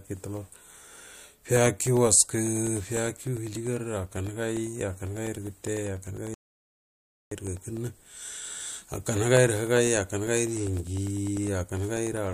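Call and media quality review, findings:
Periodic USB or driver dropouts: regular ticks through the speech from 0.07 to 12.27 s, every 0.1 s, each about a millisecond of signal replaced by silence. Audio driver or USB bus stalled at a fixed interval by a recurring background task.

Audio dropout to silence: speech cuts out from 6.34 to 7.32 s, a gap of about 0.97 s of silence with no room tone. Input likely lost through device disconnect, link failure or mute while recording continued writing silence.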